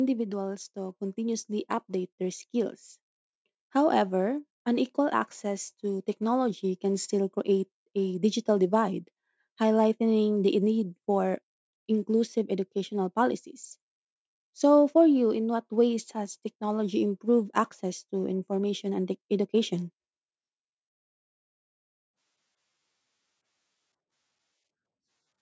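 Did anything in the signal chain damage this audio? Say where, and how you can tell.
Yes. Automatic gain falling occurs from 0.05 to 0.79 s. The call-processing stage's gain control judged the opening too loud and eased its gain down by about 4 dB, so the speech and its background sink together. A fader-like drop of both, rather than noise pumping up between syllables, marks this as AGC rather than a compressor's fast release.

Automatic gain rising follows from 0.73 to 2.85 s. The same control, now hearing the input as too quiet, raises gain by about 6 dB over roughly two seconds. The speech and room tone swell in step, slowly, which separates this from a level jump at a splice or a gain-switch step. The overlap at 0.73 to 0.79 s shows one controller reversing direction. The call microphone path's band limit, with nothing above 8 kHz, is part of that processing and is not damage.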